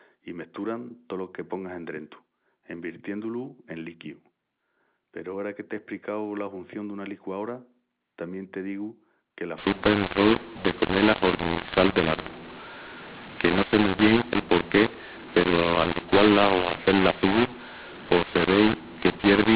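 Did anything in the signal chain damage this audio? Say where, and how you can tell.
Yes. A mu-law and A-law mix-up runs from 9.58 s to 19.56 s, at the codec decoding stage. The 8 kHz A-law telephone stream is decoded as mu-law, scrambling sample levels: speech turns harsh and distorted, and quiet gaps fill with noise.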